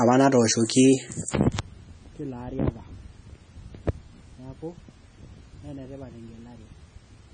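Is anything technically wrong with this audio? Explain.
Yes. MP3 compression affects the whole speech clip, with nothing above 9.4 kHz. An encoder short of bits, which fits a bitrate near 23 kbps, likely cut the treble and zeroed weak frequency lines that flicker frame to frame. That gives a heavy, watery, swirling texture and metallic sibilants.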